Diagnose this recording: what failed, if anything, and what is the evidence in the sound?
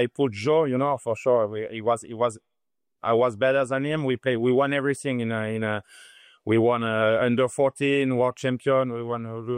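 Nothing failed here as far as I can hear; the sound holds together the whole way, with nothing at any stage of the chain giving itself away.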